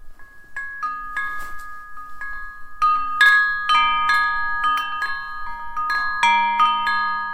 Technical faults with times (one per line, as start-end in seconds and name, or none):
none